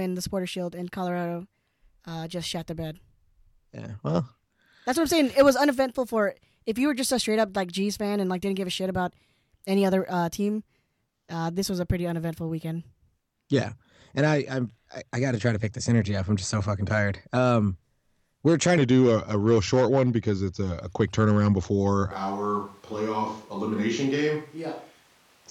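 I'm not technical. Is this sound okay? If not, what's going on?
No. Section at the wrong speed: from the start until 18.78 s, the speech runs about 12% too fast, so voices sound rushed and roughly two semitones higher. The likely cause is playback or editing on the wrong clock, which shifts speed and pitch together.

Switch to a distant microphone: at 22.12 s, until the end, the voice suddenly turns hollow and roomy, becomes quieter and thinner, and picks up more background noise. This likely means the close microphone dropped out and a farther one took over.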